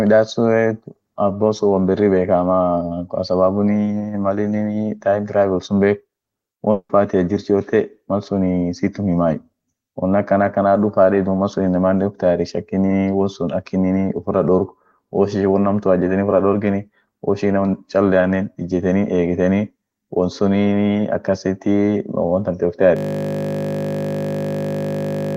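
At 6.71 s the speech smears into a fading buzz, goes silent briefly, then resumes near 6.91 s with about 180 ms gone, likely a long network dropout. From 22.97 s to the end, a steady 50 Hz buzz replaces the speech: a system hang loop repeating one 20 ms buffer over and over.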